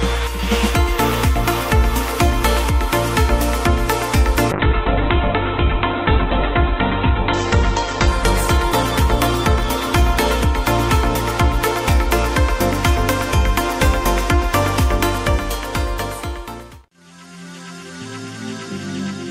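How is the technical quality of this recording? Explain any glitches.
One significant glitch stands out: a call bitrate drop from 4.52 s to 11.41 s. The audio goes from full band, reaching up to 20 kHz, to a muffled, rough sound capped at 4 kHz. The bandwidth estimate collapsed and the Opus encoder was pushed to a very low rate; the degradation points to a fall from roughly 96 kbps to about 7 kbps, held at its worst for about 2.1 s. Coarse coding adds a watery texture until the rate recovers.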